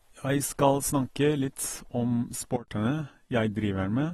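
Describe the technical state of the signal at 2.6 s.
At 2.6 s the level falls abruptly by about 15 dB between 2.56 and 2.68 s, with speech and background noise dropping together and no ramp. This sudden gain jump is likely a digital gain change applied from one sample to the next.

Across the same moment, AAC compression damage is plainly audible. Nothing is present above 12.4 kHz, and the speech sounds dull and smeared, with a warbling, fizzy texture on sibilants. This points to AAC-LC coding at a low bitrate, likely around 32 kbps.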